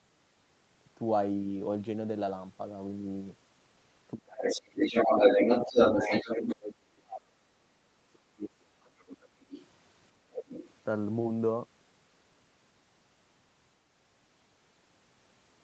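From 4.15 to 4.36 s, the echo canceller likely mistook double talk for echo and turned everything down: the speech drops by roughly 30 dB in a short dip. From 4.3 to 6.55 s, the echo canceller likely failed to remove the loudspeaker signal, so the other side's voice leaks through, about 10 dB louder than the talker. Inside that stretch, speech suppressed in double talk recurs from 4.52 to 5.23 s, dropping roughly 25 dB, and from 5.66 to 5.77 s, a brief dip of around 20 dB. From 6.03 to 9.42 s the same suppression holds for about three seconds, with the speech pushed down by up to roughly 30 dB. The other side's voice leaks through again, more faintly, from 9.43 to 9.67 s at about 15 dB below the speech and from 10.32 to 10.7 s at about 5 dB below it.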